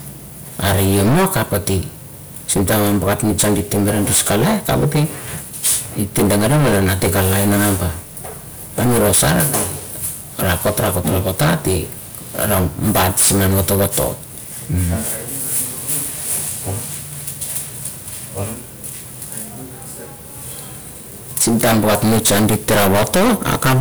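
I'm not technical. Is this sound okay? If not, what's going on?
No, it's not. The whole recording has hard clipping: the speech was pushed far too loud, so its peaks get chopped flat, and every loud moment turns harsh and fuzzy.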